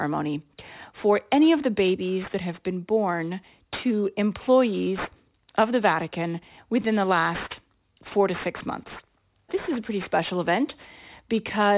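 A speech clip with aliasing throughout. The sibilants sound gritty and metallic, and energy runs hard up to 4 kHz. That fits a drop to an 8 kHz rate with no low-pass first. Content above 4 kHz folds back to false pitches, roughly 20 dB below the speech.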